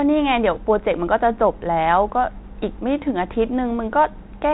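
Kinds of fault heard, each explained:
Bit errors on an ADPCM link: flipped bits on what sounds like a 32 kbit/s G.726 path knock the decoder's step size off, giving a rough popping burst from 2.98 to 3.03 s.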